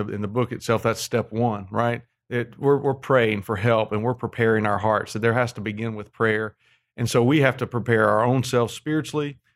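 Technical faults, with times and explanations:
No technical faults are audible.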